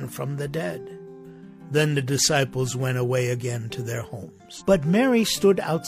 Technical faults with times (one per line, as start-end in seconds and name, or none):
4.55-4.62 damaged data in a compressed stream